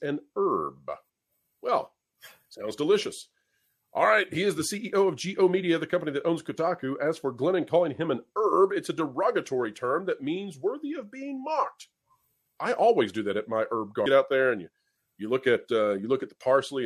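At 14.05 s the audio jumps abruptly forward, with a tiny blip at the join. The likely cause is a stream segment skipped: one chunk of the segmented stream failed to load, so the player moved on to the next and that stretch of programme never played. On a waveform the envelope changes without any fade, with a single sharp spike at the splice. A spectrogram shows a thin vertical broadband line there, and the content on either side doesn't line up.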